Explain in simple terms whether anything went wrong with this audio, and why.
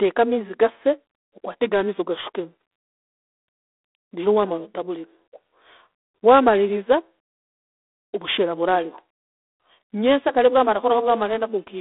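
The speech passed through G.726 ADPCM phone coding from start to end. Nothing above about 3.8 kHz survives. A rough hiss rises and falls with the talking.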